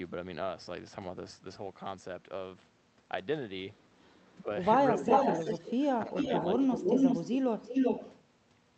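Speech over a call link, with energy on a spectrogram ending near 8 kHz as the Opus path would give, and a trail of echo leak, most likely from a far-end loudspeaker whose echo canceller let its pickup through. A copy of the speech returns about 0.36 to 0.37 s late at 4.03–4.35 s (far below the main speech), 4.97–5.72 s (roughly as loud or louder), 6.18–7.40 s and 7.62–8.21 s (both about equal), seen as duplicated, time-shifted formant patterns. Speech suppressed in double talk also shows at 4.43–4.49 s, 4.95–5.07 s, 5.42–5.84 s and 6.06–6.16 s. The waveform envelope dips by around 10 dB in most of these spots and about half that at 4.95 s, likely because the canceller ducked everything while both sides sounded at once.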